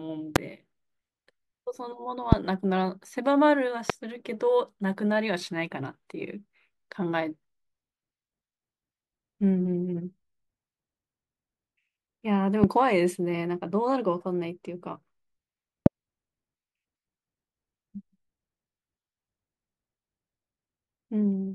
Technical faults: loud pop

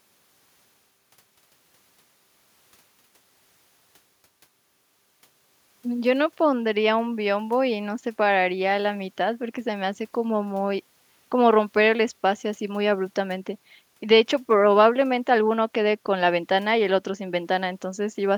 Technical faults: none

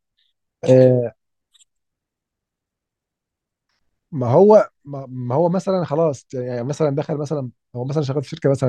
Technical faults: none

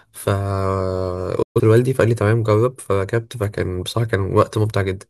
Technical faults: digital broadcast dropout

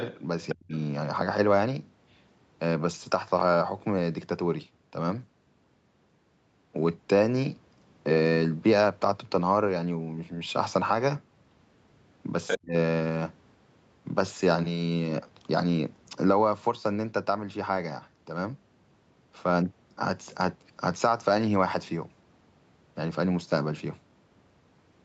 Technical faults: other side's voice leaking through; speech suppressed in double talk

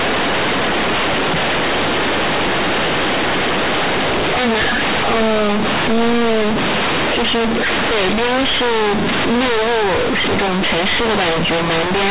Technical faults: companded audio read as linear

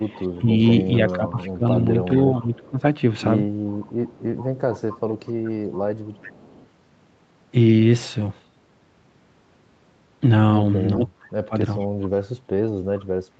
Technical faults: echo leak; speech suppressed in double talk

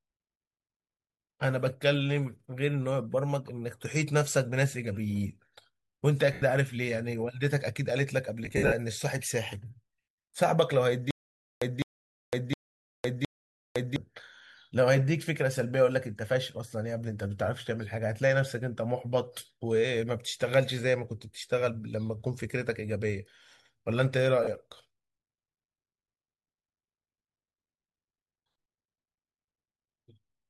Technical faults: lost LE Audio frames; stutter with silent gaps

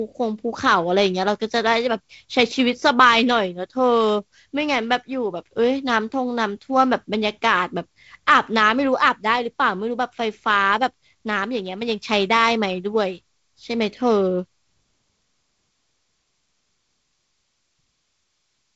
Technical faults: none

